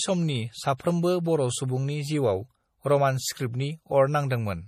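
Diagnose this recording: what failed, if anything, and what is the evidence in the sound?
The speech carries MP3 compression damage from start to finish, most likely from a lossy codec stage. Nothing is present above 15.1 kHz. The damage is plainly audible, which fits a low bitrate near 40 kbps. Short of bits, the encoder cut the treble and dropped weak detail.

Pre-echo appears at 0.77 to 0.80 s, a 26 ms smear of hiss ahead of a sharp attack. It comes from the codec too. Noise sized for the loud attack was spread across its whole block, filling the quiet moment before it.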